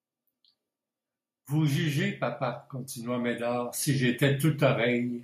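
Automatic gain rising from 3.03 to 5.13 s, after "jugez papa": the gain control judged the input too quiet and gradually lifted speech and background together by about 5 dB.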